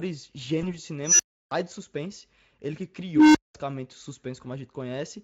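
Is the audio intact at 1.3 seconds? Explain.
No. An unstable filter fault runs from 1.04 to 1.51 s: a recursive filter's output grows without bound, swelling into a squeal around 5 kHz over about 150 ms until it overflows. At 1.3 s the sound has dropped to a 320 ms silence before "do suspense ele que".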